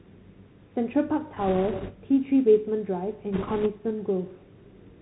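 Throughout, the Bluetooth CVSD headset codec confines the speech below 4 kHz. Its one-bit delta coding leaves granular hiss, scratchy sibilants and slope-overload distortion, which fits a 64 kbps CVSD link. A spectrogram shows an empty band above 4 kHz.

From 1.36 to 1.92 s and again from 3.33 to 3.68 s, bit errors on a Bluetooth voice link, at a rate of a few percent, add rushing crackle without loud clicks. They show as raised broadband noise, with no tall waveform spikes.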